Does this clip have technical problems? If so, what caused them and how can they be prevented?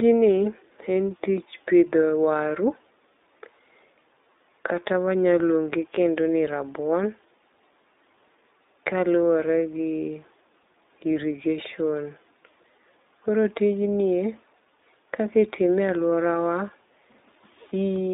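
Yes. The speech has passed through the iLBC codec for its whole length. The band is cut to roughly 250 Hz to 3.7 kHz, so it sounds thin and telephone-like. iLBC codes each 20 ms frame's excitation independently, and the damage is plainly audible as a rough, synthetic texture. This points to iLBC's 15.2 kbps mode. To prevent it, record or send the speech with a wideband codec at a higher bitrate.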